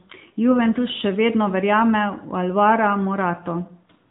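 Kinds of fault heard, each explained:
AMR narrowband mobile codec, throughout: the speech has passed through the AMR-NB mobile codec, which samples at 8 kHz and rebuilds the voice from a vocal-tract model excited by a few pulses in each 5 ms slice of a 20 ms frame. Nothing above 3.8 kHz survives, so sibilants and consonant detail are dulled, and the codec damage is plainly audible as a buzzy, synthetic edge that fits an upper-rate mode of about 10 kbps.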